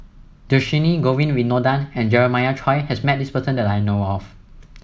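No technical faults are audible anywhere in the speech.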